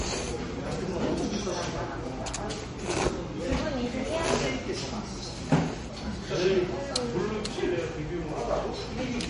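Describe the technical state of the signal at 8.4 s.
At 8.4 s, as across the whole clip, the sound shows what is likely MP3 compression at a low bitrate, near 38 kbps. Nothing sounds above 10.6 kHz, and weak components flicker between frames, giving a watery swirl and smeared attacks that a simple low-pass filter would not add.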